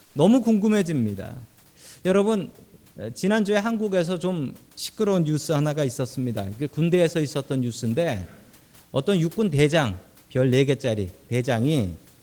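Comfort noise in place of the background, from 0.05 to 0.15 s: for 100 ms the room's real background, about 35 dB below the speech, becomes a steady, featureless hiss about 2 dB quieter, likely because discontinuous transmission halted sending and the receiver synthesised filler noise.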